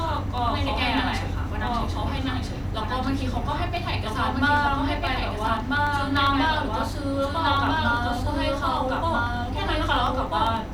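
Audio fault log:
Throughout: doubled audio track. A second full-band copy of the speech runs about one and a half seconds behind, at roughly the same loudness. It has no decay or room colour. The likely cause is a slower second capture path mixed back in.
0.08 to 10.67 s: periodic USB or driver dropouts. Every 0.1 s, a tiny sliver under a millisecond is skipped, about a hundred times in all. Each skip leaves a small jump in the waveform, heard as a regular tick during speech.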